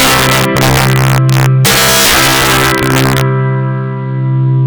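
Integer overflow runs through the whole clip. The signal is driven about 7 dB past full scale, and instead of being limited, samples beyond the largest integer wrap to the opposite sign. Roughly a few percent of samples are affected, producing harsh, violent cracks on every loud peak.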